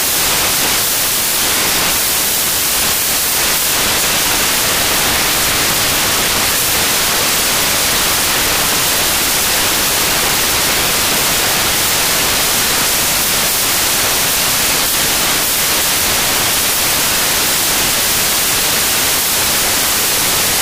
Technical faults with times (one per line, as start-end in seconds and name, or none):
0.00-20.62 samples built from the wrong bytes